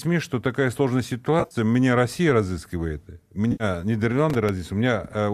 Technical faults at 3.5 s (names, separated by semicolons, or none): AAC frame loss with concealment